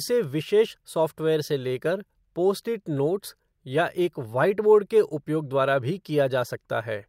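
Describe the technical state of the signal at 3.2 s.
At 3.2 s the speech signal is intact, with no fault to be heard at that moment.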